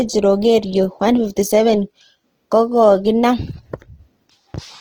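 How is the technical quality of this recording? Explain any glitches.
The quality is held back by one problem that runs the whole way through. It sounds like Opus compression, likely at a low rate around 16 kbps in music mode, with bands filled by folding or noise, so speech turns grainy and rough.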